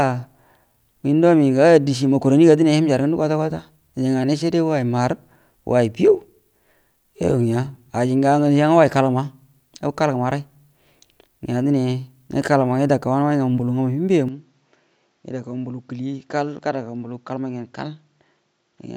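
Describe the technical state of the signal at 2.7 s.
At 2.7 s the audio is intact, with no audible fault at that point.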